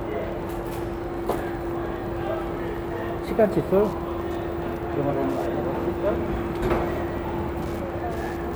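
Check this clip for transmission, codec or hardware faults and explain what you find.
There's one fault, and it runs through the whole clip: Wi-Fi interference. A nearby Wi-Fi radio's beacon, sent every 102.4 ms, is getting rectified by the audio circuit, so you hear a steady tick just under ten times a second, sitting roughly 30 dB below the sound.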